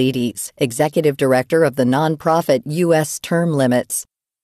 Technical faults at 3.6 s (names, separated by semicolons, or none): none